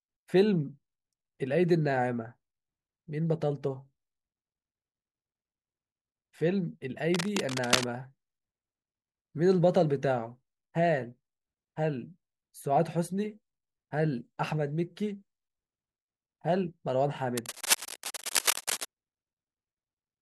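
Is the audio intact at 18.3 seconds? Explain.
No. At 18.3 seconds the speech is overlaid by cable scratch noise, a burst that runs from about 17.37 to 18.85 seconds and sits at roughly the same level as the voice. It sounds like scratching and rustling, and the likely cause is a worn cable or connector being moved so that its contact resistance flickers. Unlike a single click or dropout, the noise here is dense and irregular.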